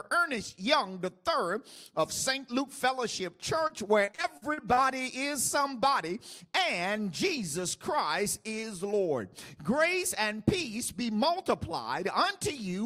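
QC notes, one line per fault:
3.67–4.79 s, repeated packet loss (robotic sound): over this roughly 1.1 s stretch the audio breaks into eight short holes, the longest 43 ms, adding up to 240 ms missing, about a fifth of the span. Most of it (218 ms) is patched by stretching the last sound forward, which gives the choppy, robotic texture. A single dropout would be one clean gap. Here the holes come one after another.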